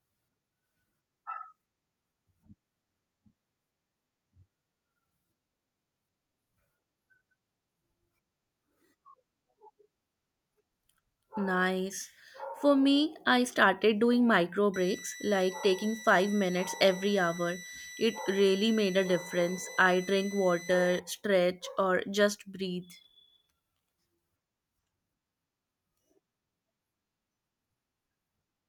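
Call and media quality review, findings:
Switching supply whistle, 14.74 to 21.00 s in speech. High whistle near 2 kHz, wandering between 1.96 and 2.01 kHz, about 20 dB under the signal. Probable component: switching regulator in audible burst mode, or two supplies beating. Unlike mains hum, the tone is far above 50/60 Hz harmonics. Unlike acoustic feedback, the pitch drifts.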